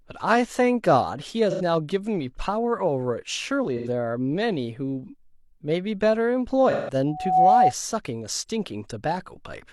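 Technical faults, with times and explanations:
1.50–1.61 s, 3.77–3.88 s and 6.71–6.95 s: AAC frame loss with concealment. Each gap leaves a smeared, noisy patch. The decoder rebuilds the missing audio from the last good spectrum. The first two gaps last about 85 ms, which fits two lost frames. The third lasts about 171 ms, which fits four.
7.06–7.74 s: loudspeaker feedback squeal. A steady 745 Hz tone swells over about a third of a second. It settles at roughly 10 dB above the speech. The microphone is picking up its own loudspeaker, and at 745 Hz the loop gain exceeds one.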